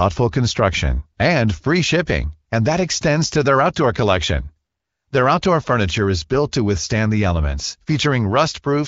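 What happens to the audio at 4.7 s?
At 4.7 s the speech comes through intact, with nothing beyond the light coding of the AMR wideband (HD Voice) codec at 15.85 kbit/s.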